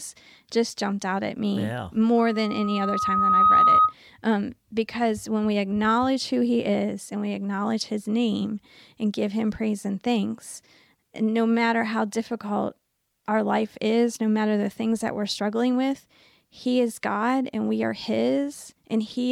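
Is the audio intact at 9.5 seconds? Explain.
Yes, the speech at 9.5 seconds comes through intact, with no audible fault at that moment.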